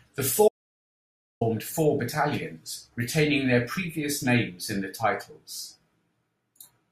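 A speech clip with one audio dropout to silence from 0.48 to 1.41 s, so about 0.93 s is simply gone. The gap is silent, no room tone at all, and the sound snaps back mid-flow on "four battalions retaining their". Likely the input feed dropped while the recorder kept writing.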